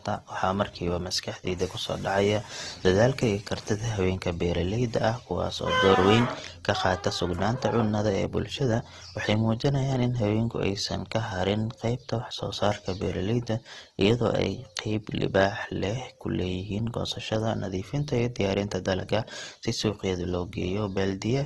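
A speech recording carrying plainly audible Opus compression from start to finish: the speech sounds rough and grainy rather than swirly, as if noise fills the upper bands, which likely points to Opus's CELT mode at a low bitrate around 16 kbps. A spectrogram shows nothing above 12.4 kHz and a speckled, noisy texture in place of clean harmonics.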